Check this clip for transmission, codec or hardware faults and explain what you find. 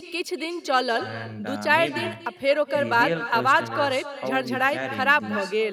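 There is one fault, echo with no canceller, and it runs through the whole speech clip. Every phrase is followed about a fifth of a second later by a fainter copy, roughly 14 dB below the original, sounding thinner. The far end is playing the call through a loudspeaker, its microphone picks that sound up, and no echo canceller removes it, so the talker's own voice returns after the network round trip. On a waveform each burst trails a smaller delayed twin. A spectrogram shows each syllable's pattern repeated as a weaker shadow just to its right.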